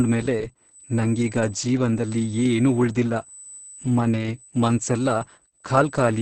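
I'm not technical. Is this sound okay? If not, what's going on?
No. Two things are wrong, and both last the whole clip, from the first moment to the end at about 6 seconds.

The first is USB whine. The USB connection draws power in very fast, regular bursts, and some of that electrical rhythm is leaking into the audio through the power or ground wiring. You hear it as a thin, steady, high-pitched tone at 8 kHz that never changes pitch. It sits behind the speech.

The second is Opus voice compression, squeezed very hard. To save data, the speech was passed through a voice coder that rebuilds the voice from a rough model instead of storing it faithfully, using very little data for each 20 ms slice. It also throws away everything above about 8.7 kHz. The result is heavy damage: the speech sounds dull and muffled, with a hoarse, slightly robotic quality.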